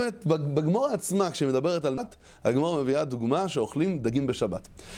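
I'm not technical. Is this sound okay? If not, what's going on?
No. At about 1.97 s the audio suddenly jumps forward, and roughly a second of sound is simply missing. The two sides are joined with no pause. This is a skip ahead: a stretch of audio was lost or thrown away while later audio was already waiting, so playback continued from there.

From about 2.07 s to 4.89 s the sound runs faster than it should, about 12% quick, yet keeps its normal pitch, so it feels hurried. This is a jitter buffer speed-up. The receiver had built up extra delay and removed many tiny slices, roughly a third of a second in total, to catch up.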